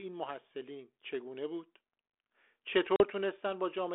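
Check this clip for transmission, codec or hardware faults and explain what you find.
There is one fault in this speech clip, packet loss on an ADPCM call, at 2.96 to 3.03 s. A silent gap of about 40 ms, roughly two packets, cuts in abruptly. The decoder's predictor and step size lose track of the sender's, so the speech comes back with brief distortion before settling. The 32 kbit/s G.726 path underneath stays band-limited to 300 Hz to 3.5 kHz, with light codec damage.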